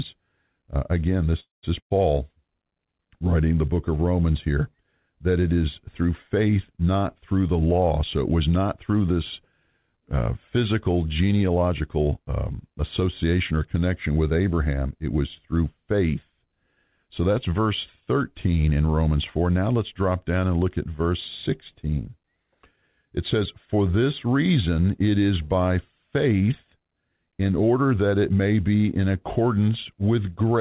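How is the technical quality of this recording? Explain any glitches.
The recording has a narrowband call sound with nothing above 4 kHz, which fits a G.711-style telephone codec. There are three kinds of glitch: an early stall, a dropout just after it, and two hurried stretches later on.

A call audio freeze runs from 1.40 to 1.65 s. The last sound carries on as a fading buzz or hiss and then goes silent for about 160 ms. Speech resumes where it stopped, with nothing lost. The likely cause is delayed packets draining the jitter buffer.

A burst of packet loss follows at 1.79 to 1.92 s. The receiver stretches the last sound into a fading tail and then falls silent. When speech returns, about 120 ms of it is simply gone.

Jitter buffer speed-up occurs at 11.49 to 12.27 s, at 114% speed, and again at 12.69 to 13.53 s, at 108%. The buffer held excess audio and trimmed out short pitch-period slices, roughly a tenth of a second in total in the first stretch and somewhat less in the second. 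The speech sounds rushed but stays at the same pitch.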